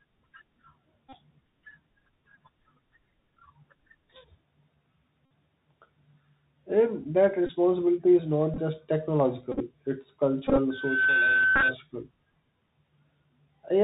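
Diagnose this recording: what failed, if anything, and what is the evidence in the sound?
The speech is band-limited to about 4 kHz throughout, with a granular hiss under it and scratchy s sounds. Loud, bright syllables smear and distort. This is the Bluetooth CVSD headset codec, at the codec stage. The codec sends one up-or-down bit per sample, which fits a 64 kbit/s CVSD stream. Its step size adapts too slowly for fast, loud high-frequency swings, so those overload. The quantising steps also leave a constant grainy floor.

Brief buzzy stutters appear at 1.09–1.16 s, 2.36–2.37 s, 5.25–5.31 s, 7.47–7.49 s, 8.54–8.58 s, 9.52–9.61 s, 10.47–10.58 s and 11.56–11.63 s. This is the Bluetooth headset packet repeated fault, on the radio link between headset and phone. Voice packets were lost, and the chip replayed the previous packet's bits. Each 3.75 ms repetition produces a buzz near 267 Hz. 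From 8.54 s on, the losses are scattered bursts with runs of up to about 20 ms.

From 10.70 s to 11.75 s a steady 1.5 kHz tone swells up over under half a second. It then sits about 5 dB above the speech, overlapping the dropout at 11.56 s. This is loudspeaker feedback squeal in the acoustic path around playback. The microphone is hearing the loudspeaker it drives. At 1.5 kHz the loop gain exceeded one, so that frequency kept reinforcing itself.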